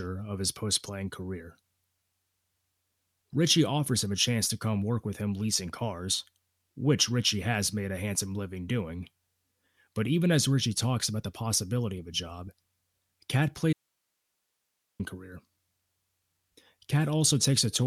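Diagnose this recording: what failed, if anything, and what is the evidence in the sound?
Audio dropout to a faint residue from 13.73 to 15.0 s: the speech cuts out abruptly for about 1.26 s, leaving only hiss roughly 50 dB below the signal. The downstream path stayed live, so the likely cause is an intermittent analogue connection ahead of it.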